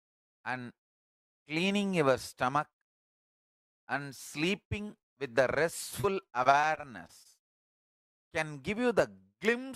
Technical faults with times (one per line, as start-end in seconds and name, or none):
6.01-6.05 short concealed packet loss
6.43-7.27 repeated packet loss (robotic sound)